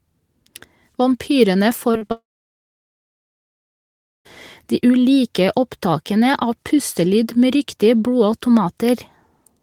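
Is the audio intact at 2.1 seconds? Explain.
No. At 2.1 seconds the audio is caught in a short concealed packet loss from 2.07 to 2.12 s. About 20 ms of the stream never arrived in time, and the decoder bridged the gap by extending the preceding sound. The patch is a quick smear or wobble rather than a gap. It echoes a similar 40 ms patch just before it, at 1.97 to 2.03 s.

What separates it from a mere glitch is what follows: a long network dropout runs straight on from 2.12 to 4.27 s. There is a brief fading buzz or hiss, then roughly two seconds of silence before the sound resumes. Because of that sustained silence, this is likely a stall in the connection rather than a blip the receiver could hide. Here far more is lost than in the short losses: the material in that stretch, about 2.1 s, is simply gone.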